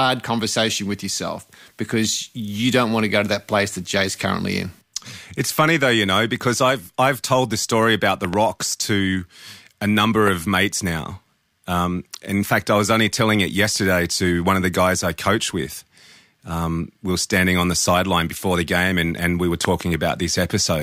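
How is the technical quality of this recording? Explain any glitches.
Three bursts of loud pops spoil the recording. At 8.25 to 8.36 s and 19.65 to 19.83 s come double pops, and at 10.28 to 10.30 s a single one, all well above the speech level. Likely a voltage step from a plug, switch or static; the speech continues underneath, unlike a dropout click, which leaves a gap.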